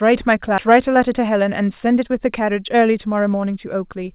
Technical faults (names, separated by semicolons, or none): skip ahead; jitter buffer speed-up